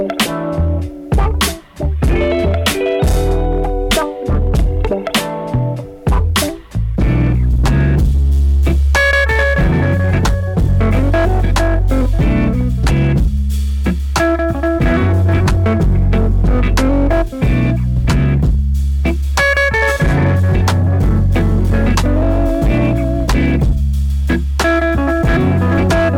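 Hard clipping runs through the whole clip. The signal reaches a stage about 8 dB hotter than it can pass, so every peak is sliced flat, and something like one sample in seven sits pinned at the clipping limit. On a waveform the loud passages look like blocks with squared-off tops. A spectrogram shows harmonic energy smeared far above the normal content. By ear, each loud moment turns into a gritty, buzzing fuzz.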